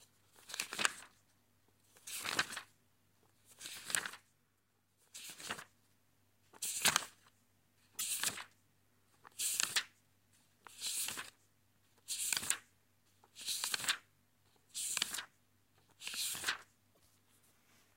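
A brief garbled skip, the sound jumping ahead, at 7.98 to 8.01 s and 16.94 to 16.98 s, likely a broken MP3 bit reservoir: frames after a gap decode borrowed bytes from the wrong frame.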